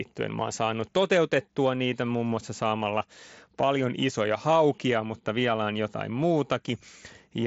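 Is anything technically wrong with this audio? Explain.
No, nothing here is technically wrong; it's speech over a wideband Bluetooth headset link using the mSBC codec, so the top end stops at about 7.7 kHz, just as that path normally does.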